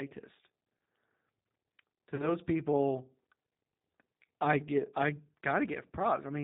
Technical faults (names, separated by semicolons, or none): G.729 codec; VoIP packet loss concealed by the speech codec